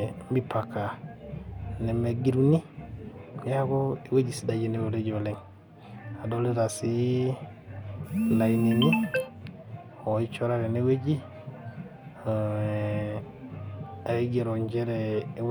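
No technical faults can be heard anywhere in this speech recording.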